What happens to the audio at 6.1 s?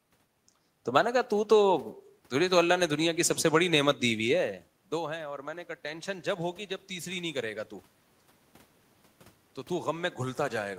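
At 6.1 s you're in the middle of an automatic gain rise that runs from about 4.92 to 7.57 s. Just before it, around 4 s, the talker moved and the input dropped by about 16 dB, so the gain control decided things were too quiet and started pushing its gain up, about 5 dB over those two and a half seconds. You hear the voice and the room noise swelling together, slowly, rather than any sudden jump.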